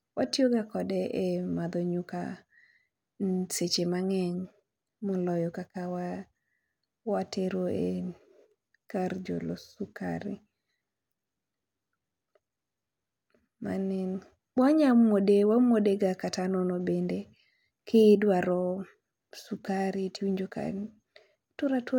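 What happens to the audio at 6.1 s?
Nothing goes wrong at 6.1 s; the speech carries on intact through that moment.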